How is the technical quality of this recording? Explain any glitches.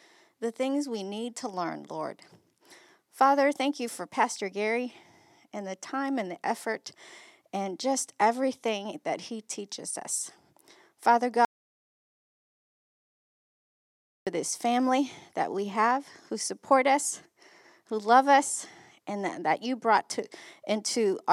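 One glitch affects the recording. An audio dropout to silence runs from 11.45 to 14.27 s, likely from the input being lost while recording continued writing zeros. The speech cuts off abruptly, room tone vanishes entirely for 2.8 s, and sound returns mid-flow at "this family that we".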